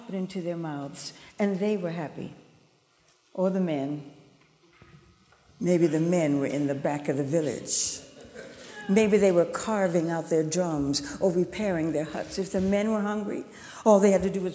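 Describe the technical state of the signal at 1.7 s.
At 1.7 s the signal is intact, with only the ordinary band limit of call microphone processing, which leaves nothing above 8 kHz and thins the lowest bass.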